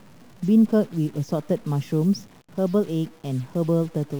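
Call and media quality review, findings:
Stuck bit, whole clip. Grainy noise riding on the speech, and the pauses aren't silent, filled with a low hiss-buzz instead. Likely a bad data line or converter with one bit pinned. About half the samples land off by a fixed step around -45 dBFS, flipping with the sign of quiet samples, hence the noisy gaps. Worth checking the ADC/interface wiring.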